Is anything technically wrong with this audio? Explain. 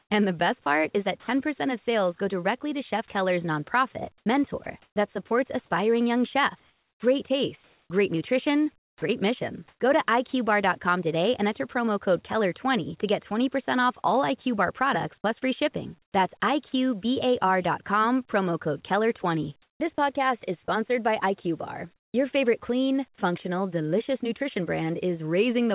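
Yes. Sound chopped by the voice detector occurs at 0.00–1.28 s, 3.08–9.80 s, 14.02–16.72 s and 19.62–22.14 s. The likely cause is the sender's detector toggling transmission on and off, so quiet portions were swapped for comfort noise: about 0.2 s, 1.3 s, 0.22 s and 0.4 s in those stretches. The audio sounds choppy, with holes where the sound drops out. Throughout the clip, nothing is heard above 4 kHz, which fits a G.711 call codec.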